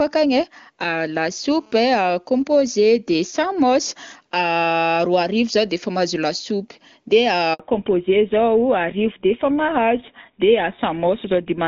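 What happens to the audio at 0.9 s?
Nothing goes wrong at 0.9 s: the speech there comes through intact, carried cleanly by the AMR wideband (HD Voice) codec at its top rate of 23.85 kbit/s.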